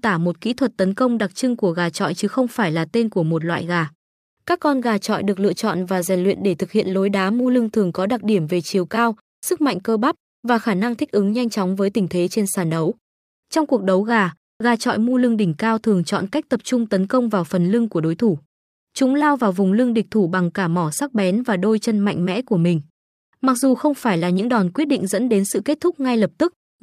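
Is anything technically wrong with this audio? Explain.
Yes. Sample clock jitter runs from 4.63 to 9.71 s, ending just before "cơ bắp và khả". The converter's timing wanders by around 2 microseconds, so each sample is captured a little early or late. The error this causes scales with how steeply the waveform is changing, sitting roughly 40 dB below the speech. It comes through as a fine hiss or grit riding on the louder, brighter parts of the speech and disappearing in the pauses.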